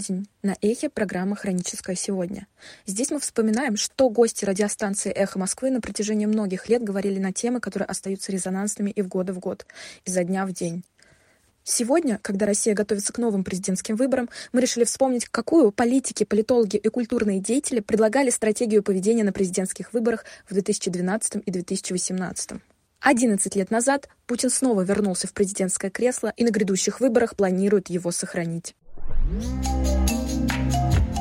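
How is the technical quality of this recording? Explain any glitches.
No glitches or technical faults can be heard anywhere.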